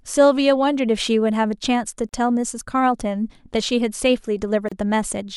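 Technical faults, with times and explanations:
2.09–2.13 s and 4.69–4.72 s: gap at a join of encoded pieces. The speech drops out for about 39 ms, then 31 ms, with smeared edges and picks up right where it left off. The pieces were joined untrimmed, so encoder start delay and last-frame padding stayed in.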